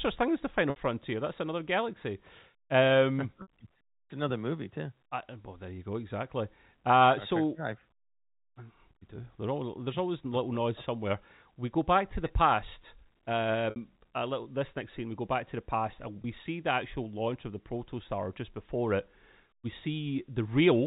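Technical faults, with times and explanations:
0.70–0.76 s (after "thing as the final"), 3.42–3.48 s, 13.70–13.76 s (before "little this next scene"): packet loss with pitch repetition. About 60 ms each, which fits three lost 20 ms packets. The last pitch period is looped, giving a brief buzzy, held tone rather than the clean silence of a plain dropout.
16.22–16.24 s (between "to the past and" and "see the actual launch"): packet loss with pitch repetition. A shorter 20 ms gap, which points to a single lost packet, bridged by a slightly held buzz instead of a click or hole.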